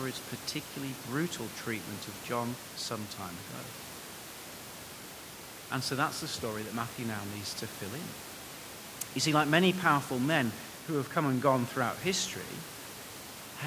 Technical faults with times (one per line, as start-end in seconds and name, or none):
none